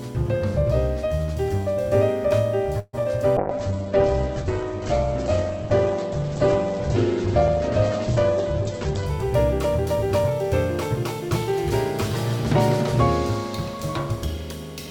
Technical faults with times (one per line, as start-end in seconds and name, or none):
2.79-2.95 call audio freeze
2.99-3.07 short concealed packet loss
3.37-9.13 call bitrate drop
8.59-10.44 jitter buffer speed-up